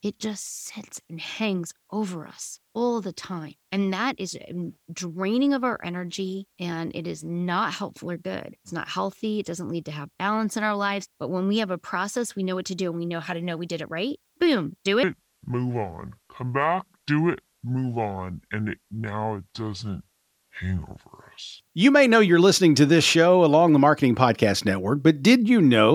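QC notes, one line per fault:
15.03–21.60 s, section at the wrong speed: the speech suddenly runs at about 0.64 times its normal rate, dropping roughly seven semitones, so it turns deep and drawn out. Pitch and tempo fall together, unlike a pitch-shift fault, likely from playback against a mismatched clock.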